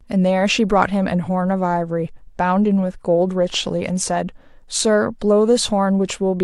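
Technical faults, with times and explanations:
No technical faults are audible in the speech.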